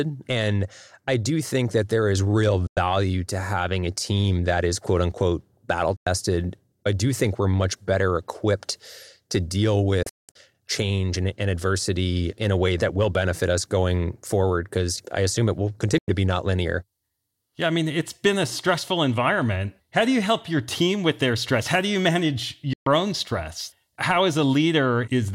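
Digital broadcast dropouts mute the speech five times, as the receiver loses or rejects frames and goes silent until good ones return. The gaps are at 2.67–2.77 s, 5.96–6.07 s after "is quote unquote battle", 15.98–16.08 s, and 22.73–22.87 s between "do you manage" and "own stress". At 10.03–10.36 s, between "better equipped to deal" and "change and and adversity", 256 ms goes missing in several holes, the longest 192 ms. Each cut fades in about 3 ms, showing as flat gaps in the waveform and blank vertical bands across the spectrogram.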